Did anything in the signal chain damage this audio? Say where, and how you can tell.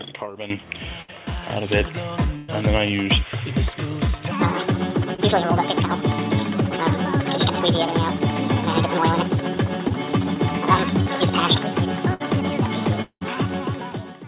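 Yes. Bursts of packet loss on the network leg appear at 1.02 s (60 ms missing), 2.36 to 2.50 s (120 ms) and 12.14 s (60 ms). Each is a held buzz or fading hiss, then the sound jumps ahead. That jump and the longer fill separate them from the brief smears below.

From 4.31 s to the end, a section at the wrong speed runs 1.68 times fast, with pitch raised about ten semitones. Pitch and tempo shift together, not pitch alone. The likely cause is a playback or editing stage applying the wrong clock rate.

Short concealed packet loss shows at 5.14 s (40 ms), 9.88 s (20 ms) and 11.02 s (40 ms). Each is a quick smear or wobble where the receiver extended the last sound and blended back. Little is skipped, unlike the longer bursts.

A long network dropout runs from 13.02 to 13.23 s, with 200 ms lost. A fading continuation gives way to about 70 ms of silence before the sound returns further on. That silent tail is what separates it from a burst, and a stalled connection is the likely cause. 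Throughout, the band stops at 4 kHz, which fits a G.711 call path.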